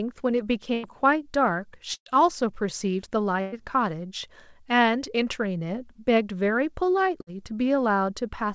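Bursts of packet loss occur at 0.74–0.86 s, 1.94–2.09 s, 3.41–3.55 s and 7.21–7.30 s. At each one the receiver stretches the last sound into a fading buzz or hiss, sinking to silence at 1.94 s. The speech then resumes with roughly 60–120 ms skipped, unlike a dropout, which merely mutes.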